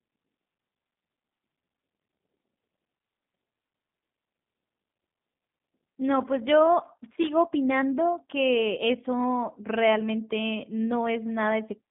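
From the start, the whole clip carries G.729 codec damage. Nothing above 3.7 kHz survives, and little below 150 Hz, which fits an 8 kbit/s G.729 stream. The speech is rebuilt from a vocal-tract model and a sparse pulse pattern rather than sent as a waveform, so it has a plainly rough, slightly synthetic, buzzy texture. A plain telephone band-limit would sound muffled but still natural; this sounds coded.

From 6.84 to 7.32 s comes a loose connector crackle. A contact in the signal path is briefly making and breaking, so the audio is chopped into fragments, and any DC on the line adds pops. It sounds like an irregular scratchy burst. A codec frame loss would give dropouts of whole frames, while this crackle is uneven and gritty.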